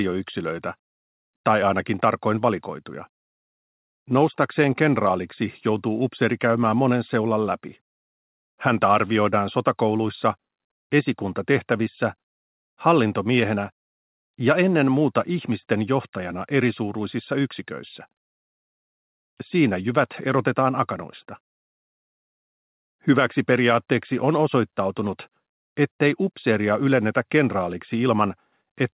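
No technical faults can be heard in this audio.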